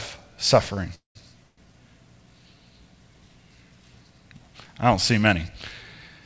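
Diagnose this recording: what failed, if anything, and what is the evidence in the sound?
The network stage, via the receiver's jitter buffer, caused a short stall from a late packet at 0.74 to 0.79 s. The speech sound there is held about 30 ms too long and then continues from the same point, so nothing is lost but everything after it runs 30 ms later. On a waveform the held stretch repeats the same cycle shape. On a spectrogram the harmonics run flat and unchanging for that instant, with a faint buzzy smear. The band still stops at 8 kHz, as G.722 normally does.

Two call audio freezes follow, at 0.95 to 1.17 s and 1.43 to 1.74 s. The likely cause is packets held up in the network until the jitter buffer emptied. In the first, about 203 ms is filled: the last sound is continued as a fading buzz and then sits silent for about 140 ms. In the second, about 143 ms is filled with a decaying continuation that never reaches silence. 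The speech then resumes where it stopped. On a spectrogram each freeze shows smeared, frozen harmonics fading out, and the first has a blank gap.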